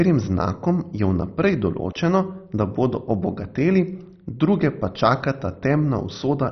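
From start to finish the speech is dull, with nothing above about 6.1 kHz, and carries a gurgling, granular roughness as upper bands flicker in and out. That points to heavy MP2 compression, likely near 32 kbps, rather than simple low-pass filtering, which would stay smooth.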